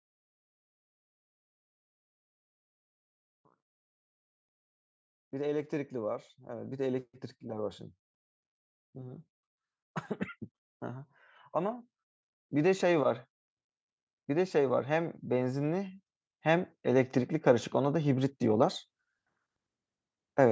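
The call's automatic gain control judged this speech input too quiet and raised its gain twice, gradually: by about 4 dB from 5.3 to 7.79 s, then about 7 dB from 14.26 to 18.75 s. Each time voice and background swell together, with nothing heard above 8 kHz.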